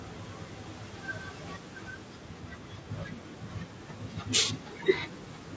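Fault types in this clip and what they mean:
Low-delay AAC compression: the speech sounds rough and grainy all the way through, with a noisy fizz filling the gaps between the pitch harmonics. That's likely AAC-ELD, the low-delay codec video calls use. Its very short frames can't resolve harmonics cleanly, so at a modest rate (around 32 kbps by the sound of it) the damage is plainly audible. The top ending near 8 kHz is just the call's mic processing.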